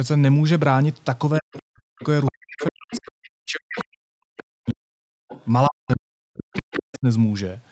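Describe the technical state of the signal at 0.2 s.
At 0.2 s the speech signal is intact, with no fault at that moment, only the expected call-path band limit that leaves nothing above about 8 kHz.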